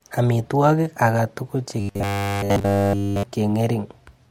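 Robotic sound from repeated short buffers runs from 1.80 to 3.25 s: the speech becomes a rigid metallic buzz at 100 Hz throughout, likely from a 10 ms buffer looped while new audio was late.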